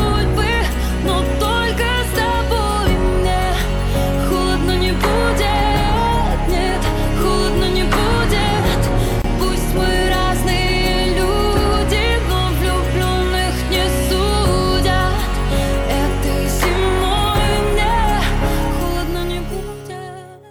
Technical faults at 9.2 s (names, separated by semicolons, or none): gap at a join of encoded pieces